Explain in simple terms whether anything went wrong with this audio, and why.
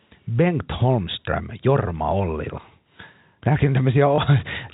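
Near the end, from 4.16 to 4.18 s, the system suffered packet loss with last packet repeated. A piece of the sound went missing in transit, and the receiver filled the 20 ms gap by replaying the previous piece, which fits one lost packet. You hear a tiny blip. The telephone-style G.711 coding keeps the sound narrow, as phone calls are.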